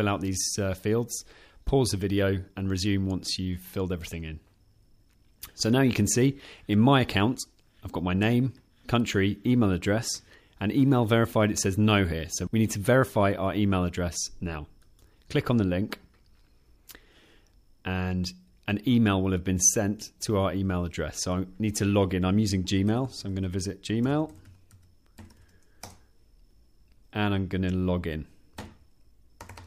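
No technical faults can be heard anywhere in the clip; the signal stays continuous and steady throughout.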